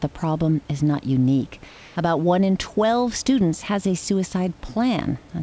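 Speech heard over a call link whose sound stops at 8 kHz, consistent with a wideband codec such as G.722, with room noise sitting about 31 dB below the voice. From 1.68 to 1.96 s, a 280 ms pause loses the real background texture and becomes a smooth, featureless hiss about 2 dB quieter. This is likely comfort noise in place of the background: the sender stopped transmitting during silence, and the receiver filled the gap with synthetic noise roughly matched to a background about 25 dB below the loud passages.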